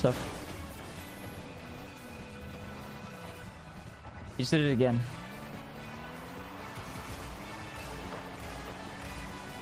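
No technical faults are audible.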